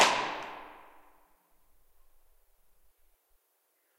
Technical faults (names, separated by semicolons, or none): none